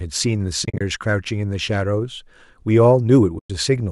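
Speech with two soft-edged dropouts, where the sound fades out and back in. From 0.65 to 0.81 s it stutters through several short holes, the longest a few tens of milliseconds, totalling about 110 ms. From 3.39 to 3.50 s about 110 ms of sound drops out. This is AAC frame loss with muting: the decoder zeroes the missing frames' spectrum, and the overlapping windows smooth each edge over roughly a frame, which fits frames of about 10 ms. A light graininess underneath is likely from low-delay AAC compression.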